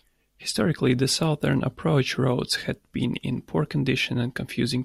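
No audible faults turn up anywhere in the speech.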